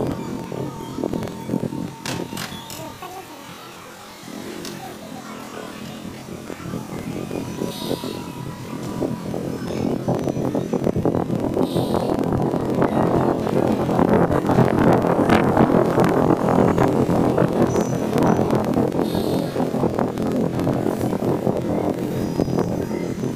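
Throughout, the sound plays an octave high with a fluttering chop at about 21.5 Hz: planar audio read as interleaved, each 46.44 ms block (which fits a 2048-sample block) playing twice at double speed.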